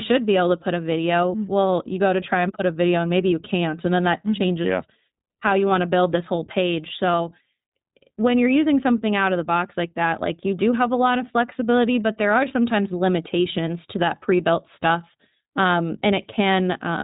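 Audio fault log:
throughout, iLBC codec: the speech is band-limited, with nothing above about 3.8 kHz, so sibilants and breath sound dull and boxy. Each short block of the signal is coded on its own, so the excitation resets at every frame boundary, which fits 20 ms frames. That independent coding gives the voice a plainly audible rough, slightly synthetic edge, and the 20 ms frame length points to the codec's higher bitrate mode of about 15.2 kbps.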